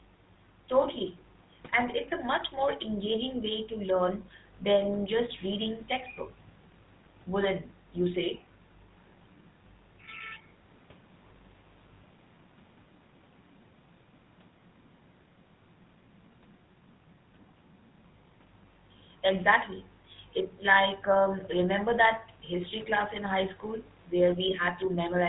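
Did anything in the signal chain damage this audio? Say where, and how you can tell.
Yes. The damage happens at the codec stage, where the GSM full-rate codec acts on the whole 25-second speech clip. It gives plainly audible buzzy, gravelly roughness, which fits a 13 kbps stream. The codec models the vocal tract and rebuilds the excitation from regularly spaced pulses, keeping only every third sample, so harmonic detail turns coarse. On a spectrogram, energy stops sharply at 4 kHz. Below that line, harmonics look smeared and grainy.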